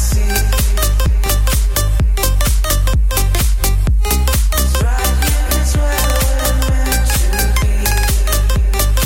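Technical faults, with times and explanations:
1.06 to 1.29 s, loud pop: two sharp pops in quick succession jump out roughly 10 dB above the surrounding sound, which carries straight on underneath them. The likely cause is a sudden voltage step or pulse entering the signal path, such as a connector being plugged in, a switch contact, a static discharge or a driver glitch. The circuitry that follows rounds that step into a short thump.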